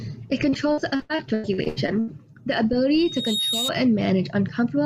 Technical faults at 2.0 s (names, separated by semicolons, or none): repeated packet loss (robotic sound)